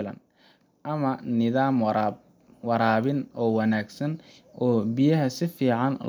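Automatic gain rising affects this speech recording from 0.84 to 2.25 s. The gain control judged the input too quiet and turned it up by about 4 dB over that stretch, so the voice and the background noise swell together rather than the voice alone getting louder.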